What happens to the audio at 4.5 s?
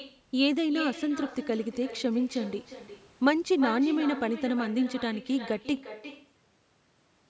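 The speech there, as everywhere in the clip, carries echo with no canceller: the far end's loudspeaker bleeds into its mic, returning a thin copy about 13 dB down, roughly 0.4 s late.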